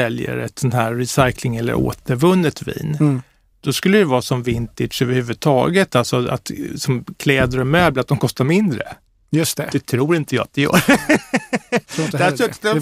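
From 8.75 s to 12.40 s the speech turns dull and gritty, its treble fading under coarse noise. This is a Bluetooth SBC bit pool drop: a congested link forced fewer bits per frame, consistent with a fall from bit pool 31 to 15, around 105 kbps.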